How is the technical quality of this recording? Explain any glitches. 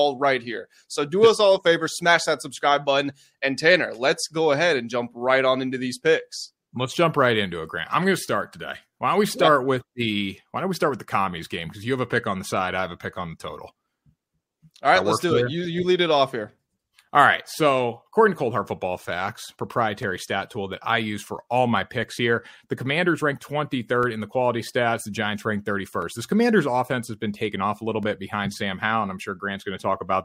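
The recording has one fault, periodic USB or driver dropouts. From 20.03 to 28.03 s, about five brief ticks fall every 2.0 s. Something blocks the USB bus or audio driver on a fixed schedule, and each time roughly 2 ms of the speech drops to silence, heard as a small regular click.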